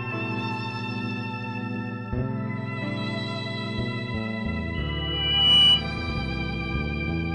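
At 4.74 s a loudspeaker feedback squeal breaks into the music and lasts until 5.85 s. The microphone is hearing its own loudspeaker, and at 3 kHz the loop gain has gone past unity, so that one frequency keeps feeding itself. It swells over roughly 0.7 s into a piercing whistle that ends up about 15 dB above the music. On a spectrogram it shows as a single bright horizontal line at 3 kHz. The waveform envelope grows steadily.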